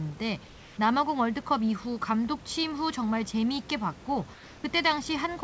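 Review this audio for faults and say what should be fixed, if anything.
The sender likely stopped transmitting whenever its voice detector judged a pause silent, so the receiver filled each gap with synthetic noise: comfort noise in place of the background. From 0.47 to 0.77 s and from 4.34 to 4.64 s, each 300 ms long, the room's textured background gives way to a steady, featureless hiss, about 3 dB and about 2 dB quieter respectively. The background audibly dips and flattens before the real ambience returns. Disabling discontinuous transmission on the sending side would keep the actual background flowing through every pause.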